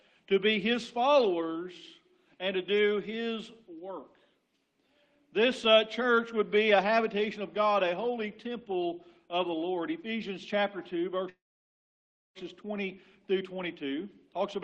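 At 11.29 s the audio stops moving forward and holds until 12.38 s, a call audio freeze of about 1.06 s. The last sound carries on briefly as a fading buzz or hiss. Then about 0.98 s of silence follows. At 12.38 s the audio resumes exactly where it stopped. Nothing is lost. Instead, a gap is inserted, and everything after it runs about 1.06 s late. The likely cause is packets delayed in transit, which left the receiver's jitter buffer empty.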